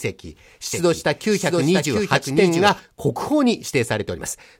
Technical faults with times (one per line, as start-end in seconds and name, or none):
0.73-2.79 doubled audio track